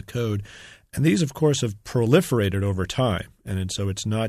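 The speech comes through with no audible technical faults anywhere in the recording.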